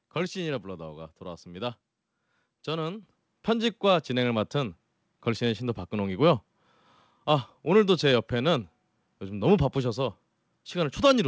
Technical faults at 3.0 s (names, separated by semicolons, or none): microphone volume stepped up